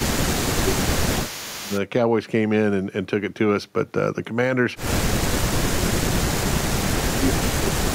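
From 0.0 to 1.72 s, the speech dips by up to about 15 dB and thins out in pieces. This is likely speech suppressed in double talk, with the talker and the loudspeaker echo turned down together. From 0.0 to 1.8 s, a faint copy of the speech follows 388 ms behind, about 15 dB down. This is likely an echo leak from a loudspeaker. From 5.24 s to the end, the speech sinks again, by up to about 30 dB, and drops out in stretches. It is likely the same double-talk suppression.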